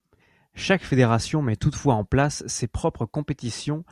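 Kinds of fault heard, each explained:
No kinds of fault are heard in this clip.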